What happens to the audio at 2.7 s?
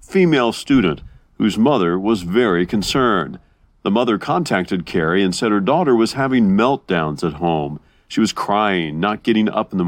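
Nothing goes wrong at 2.7 s; the speech runs on intact through that moment, with no dropout, click or distortion.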